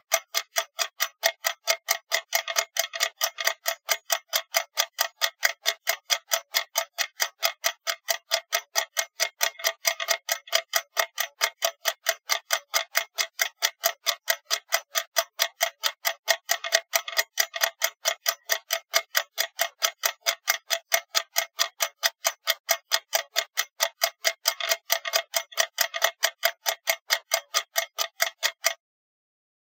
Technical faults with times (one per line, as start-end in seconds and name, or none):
none